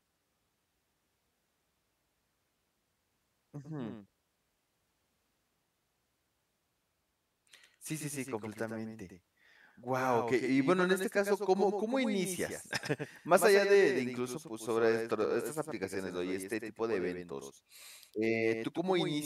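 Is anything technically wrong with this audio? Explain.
Yes, there is a doubled audio track. Throughout the speech, a second full-band copy trails about a tenth of a second behind, a few dB quieter, likely from a slower duplicate capture path. It sounds like a dry, flat slapback with no room decay. The waveform shows each burst repeated at that fixed offset, and the spectrogram shows identical ghost patterns shifted right.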